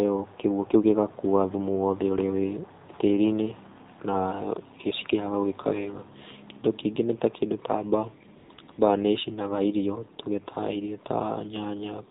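The whole clip runs through the AMR narrowband mobile codec, and the damage is plainly audible. Everything above 4 kHz is gone, and the coarse pulse-driven vocal-tract model makes the voice buzzy and synthetic, which fits a low mode around 7.4 kbps.

Then around 8.4 seconds there's a burst of AMR comfort noise. The phone decided nobody was talking and stopped sending speech frames, so the receiver filled in synthetic noise at 8.38–8.50, 8.54–8.58, 8.62–8.68 and 8.72–8.78 s. You hear smooth, even hiss flickering in and out, replacing the real background.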